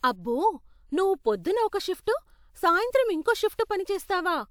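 No technical faults are audible.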